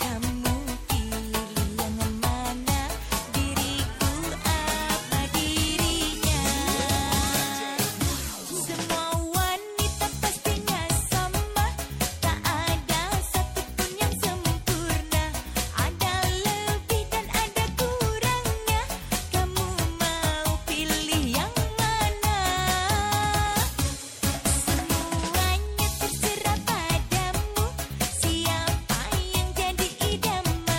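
MP3 compression damage runs through the whole clip, from start to finish at about 31 seconds. The sound is plainly degraded: quieter detail seems to flicker in and out, giving a watery, swirling texture with smeared attacks. This is likely a low-bitrate MP3 encode, consistent with about 64 kbps, where the encoder runs short of bits, discards the treble above a fixed cutoff, and drops weak frequency components that then switch on and off from frame to frame.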